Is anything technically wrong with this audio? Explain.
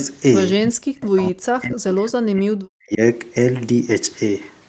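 Yes, there are two faults in this speech.

Echo leak, 0.00 to 0.05 s: a faint copy of the voice, delayed by 247 ms and well below the speech, comes back, likely because a loudspeaker echo slipped past the far side's canceller.

Speech suppressed in double talk, 0.61 to 3.0 s: the voice drops, by about 40 dB at its deepest and for about two seconds in total, likely because the echo canceller mistook overlapping talk for echo and turned it down.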